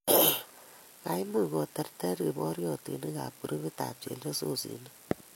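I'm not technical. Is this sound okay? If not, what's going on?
No. Low-bitrate audio saved at a high bitrate, through the whole clip: the speech carries the leftover flaws of heavy compression. It was likely squeezed into a small file first, then resaved as a larger MP3, which cannot bring back the detail already lost.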